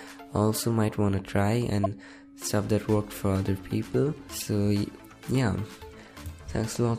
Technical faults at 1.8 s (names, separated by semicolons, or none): corrupt frame decoded